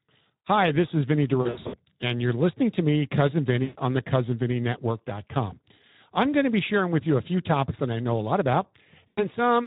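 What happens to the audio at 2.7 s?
At 2.7 s the speech sounds noisy and hoarse, as it does throughout: Speex codec damage, where a CELP coder starved of excitation bits, consistent with roughly 11 kbps, roughens the signal.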